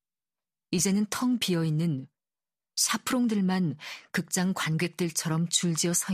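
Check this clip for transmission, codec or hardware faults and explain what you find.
No transmission, codec or hardware faults turn up in this clip.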